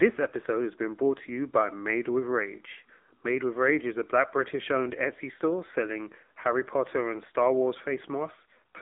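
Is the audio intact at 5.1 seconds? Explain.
No. At 5.1 seconds, as across the whole clip, the speech passes through an AMR narrowband mobile codec. Nothing above about 3.8 kHz survives, and the lows thin below roughly 250 Hz. A plain telephone band-limit would only muffle the speech. Here it also sounds buzzy and synthetic because a vocal-tract model driven by sparse pulses rebuilds it every 20 ms. That damage is plainly audible, which fits an AMR mode near 8 kbps.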